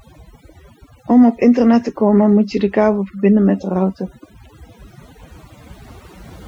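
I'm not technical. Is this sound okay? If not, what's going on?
No. Overdone noise removal, throughout the speech: the cleanup was set too hard, so the background drops and breaks up into sparkly specks.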